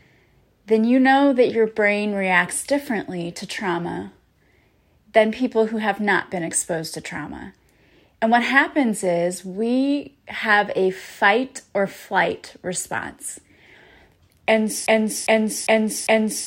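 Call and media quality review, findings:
Broken-record loop at 14.86 s, running to the end of the speech at 16.46 s. A 0.40 s fragment repeats exactly, back to back, four times. No new audio after onset; the intended content for that span is lost. Likely component: player or stream buffer. Playback stalled and kept re-sending the last held fragment instead of advancing.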